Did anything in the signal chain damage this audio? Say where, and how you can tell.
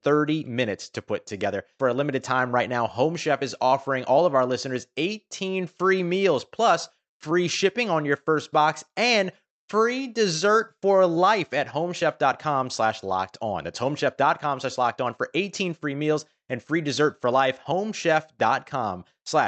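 No, nothing in the signal chain damaged this speech.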